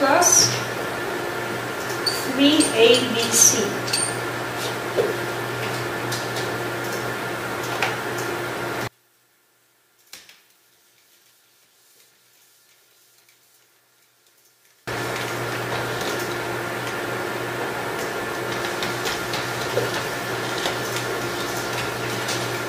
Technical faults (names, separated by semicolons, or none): one channel inverted